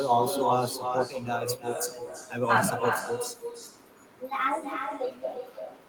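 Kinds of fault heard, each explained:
Echo with no canceller: every phrase returns about 6 dB quieter, roughly a third of a second later, thinner, from a far-end loudspeaker feeding its uncancelled microphone.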